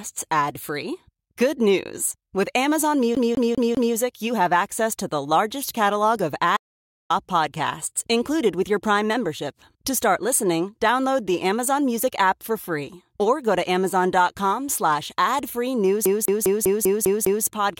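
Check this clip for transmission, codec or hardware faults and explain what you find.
Two kinds of fault appear: a CD stuck on one turn, twice, and one audio dropout to silence.

From 3.15 to 3.95 s, just before "you have access to", and from 16.05 to 17.45 s, after "slash ad free news", the CD is stuck on one turn. A scratch repeatedly throws the laser back a track. The same 0.2 s fragment plays 4 and then 7 times, with a brief mute at each jump. The fast, even stutter distinguishes it from a dropout.

From 6.57 to 7.10 s, between "the largest catalog of" and "podcasts included with your", there is an audio dropout to silence. About 0.53 s of sound vanishes into total silence with no room tone, likely from a lost input link. Nothing repeats, unlike the skip.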